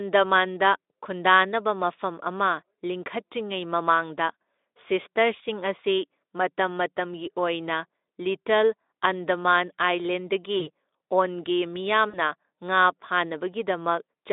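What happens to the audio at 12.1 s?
From 12.09 to 12.18 s the speech briefly smears into a buzzy tone or a coloured noise that fades. This is VoIP packet loss concealed by the speech codec: about 40 ms of audio went missing, and the decoder stretched its last pitch and filter at falling gain to fill the gap.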